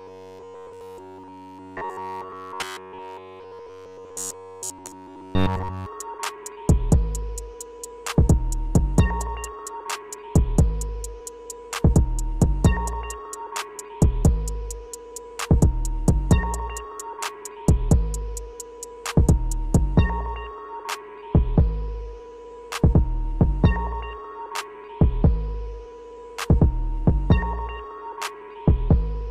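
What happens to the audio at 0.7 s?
At 0.7 s the audio is inside a stretch of robotic sound from repeated short buffers running from 0.01 to 5.86 s. New audio was likely arriving too seldom, so the playback kept looping a tiny slice of about 10.7 ms while the real material was skipped, and essentially all of this span is repeated. That loop imposes a fixed buzz at 93.8 Hz, turning the sound into a rigid, metallic drone that only loosely tracks the original.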